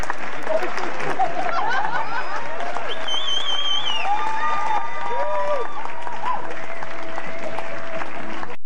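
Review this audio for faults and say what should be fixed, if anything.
A DC offset runs through the whole clip, from start to finish. The entire waveform sits shifted away from zero by a constant amount, at about -16 dBFS. You cannot hear it as a tone. It shows as a steady spike at 0 Hz on a spectrum display. It also eats headroom, because peaks on one side reach full scale sooner. Edits and fades can click where the signal jumps from the offset level to silence. Fix it with a high-pass filter at a few hertz, or with DC-offset removal. To prevent it, check converters and analogue front ends for bias drift, and keep a DC-blocking filter in the recording chain.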